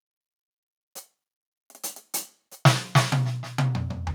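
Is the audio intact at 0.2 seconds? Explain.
Yes, the music plays through 0.2 seconds with no audible dropout, click, distortion or other fault.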